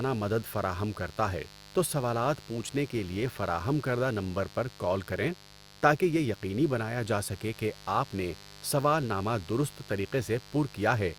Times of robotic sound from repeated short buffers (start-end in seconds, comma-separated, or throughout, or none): none